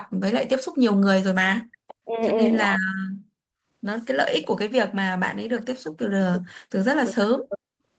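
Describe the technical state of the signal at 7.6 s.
Right around there, from 7.49 to 7.59 s, there's an echo leak: a copy of the speech about 10 dB quieter, trailing by about 0.31 s, likely a loudspeaker echo the canceller missed.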